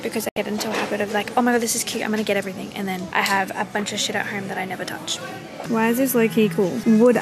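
Right near the start, from 0.29 to 0.37 s, the audio drops out for about 72 ms: a classic digital broadcast dropout. The receiver hit bad or missing frames, fading the sound to silence in roughly 3 ms, which fits about three frames being lost.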